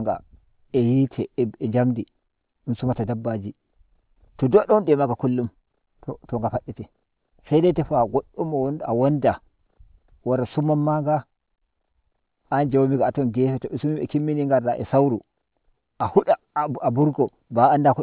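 Speech with aliasing throughout: sibilants turn gritty and metallic, with energy folded back around 4 kHz, roughly 35 dB down. That fits a drop to an 8 kHz rate without filtering. Unlike plain band-limiting, it runs hard to the band edge.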